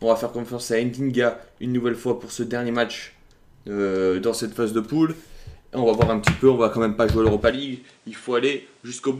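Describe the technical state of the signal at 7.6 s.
At 7.6 s the sound has just turned duller and a little quieter, roughly 5 dB down. A different, faint background noise sits around 35 dB below the signal. Nothing reaches above 10.5 kHz. The change begins at 7.51 s with no gap and lasts to the end of the clip. This is likely an input switched to a poorer device mid-recording, one with a narrower band, its own level and its own noise floor.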